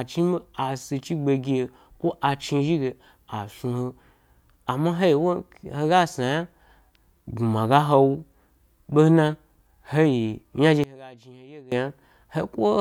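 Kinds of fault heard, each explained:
One channel inverted: from 10.84 to 11.72 s the speech abruptly falls by about 22 dB, leaving only a faint residue in place of the full, centred sound. The likely cause is one stereo channel with reversed polarity, so that on a mono sum everything common to left and right cancels and only the small difference between the two channels survives. Normal level returns after 11.72 s.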